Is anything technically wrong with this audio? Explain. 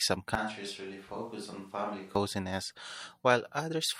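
Yes. From 0.35 to 2.16 s the speech suddenly turns hollow, roomy and thin, around 10 dB quieter over more room noise. This is likely a switch to a distant microphone.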